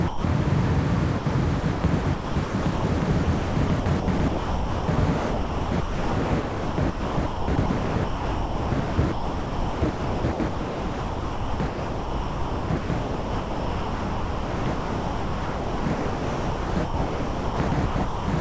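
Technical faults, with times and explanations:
0.08–0.24 s and 1.18–1.26 s, sound dropped by the voice detector: the sound gives way to steady synthetic noise for 160 ms, then 80 ms, before resuming. The sender's detector likely judged these moments as background and stopped transmitting, so the receiver filled the gap with comfort noise.
1.60–18.28 s, sound chopped by the voice detector: across this stretch the sound repeatedly breaks up, with about 12.8 s in total replaced by comfort noise. This is likely the detector toggling transmission on and off more than once. Through the G.722 call path the real sound has nothing above 8 kHz.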